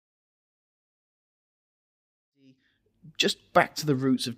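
No technical faults can be heard in this speech clip.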